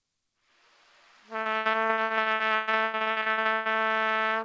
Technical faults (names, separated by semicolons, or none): repeated packet loss (robotic sound)